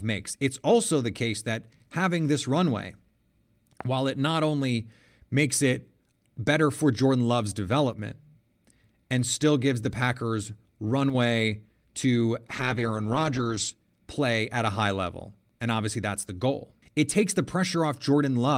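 A voltage spike, most likely from a plug, switch, static discharge or driver glitch, enters the signal path at 3.81 to 3.83 s, just before "while it not only". The circuitry downstream shapes that brief pulse into a single sharp loud pop that stands well clear of the speech, which continues beneath it. The event lasts about 21 ms, short enough to sound like one hard click-thump rather than a burst.

At 7.93 to 7.99 s, and again at 11.10 to 11.15 s, one channel drops out, likely a momentary loss in one side of the stereo feed. Once the two channels are folded to mono, everything shared between them falls abruptly by about 6 dB, and anything carried only by the missing channel vanishes. Each gap lasts about 50 ms and is heard as a quick dip in the speech.

From 12.48 to 13.77 s, just before "play at a high", the call's bandwidth estimate falls and the encoder is pushed onto far fewer bits. 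This is a call bitrate drop, and the sound suggests a fall from around 32 kbps to about 11 kbps, held at its lowest for about 1.23 s. At that rate the Opus coding becomes coarse and the high frequencies are trimmed away. The speech turns muffled and watery until the bitrate recovers.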